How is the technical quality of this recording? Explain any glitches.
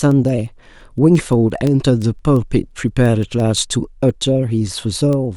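The recording has one fault. Word clock ticks run from 0.11 to 5.30 s: about thirty sharp, uneven ticks, roughly every 0.15 s. The receiving clock drifts against the sender, so a sample slips at each crossing.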